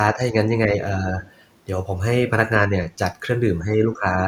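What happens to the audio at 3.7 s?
The echo canceller likely confused the talker with loudspeaker echo while both sides spoke at once and turned everything down. This speech suppressed in double talk runs from 3.61 to 3.75 s, where the speech dips by a few decibels.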